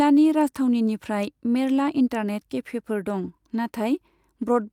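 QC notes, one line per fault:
No faults found in this speech recording.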